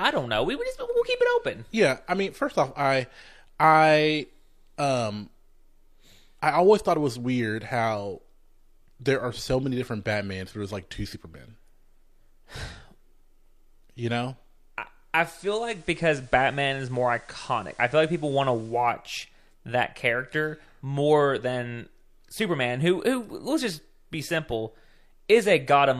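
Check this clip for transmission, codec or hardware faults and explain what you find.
One fault is present. Digital radio blending to analogue, 15.17 to 18.96 s, just after "you know I": the receiver crossfades over 311 ms to FM, adding hiss around 30 dB down and a level shift of about 1 dB.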